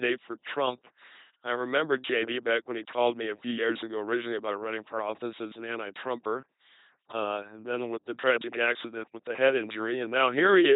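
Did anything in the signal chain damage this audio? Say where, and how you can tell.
Yes, at the codec stage, across the whole clip. The speech comes out as a buzzing, mechanical robot voice, and nothing is heard above about 3.9 kHz. That is the mark of an LPC-10 vocoder, and the heavy loss of natural voice quality fits its 2.4 kbit/s rate. Instead of sending the waveform, the coder sends a short all-pole vocal tract filter and excites it with a pulse train or noise. Each moment is forced to be either voiced or unvoiced, which produces the machine-like buzz.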